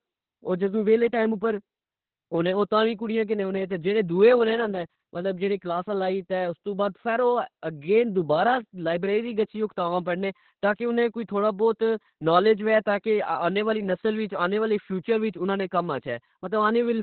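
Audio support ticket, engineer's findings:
Speech muffled, hoarse and a bit robotic start to finish, with nothing above 4.5 kHz. Heavy Opus voice compression: SILK in narrowband mode, with the excitation coded coarsely. Damage points to a starved bitrate, around 8 kbps with 20 ms frames.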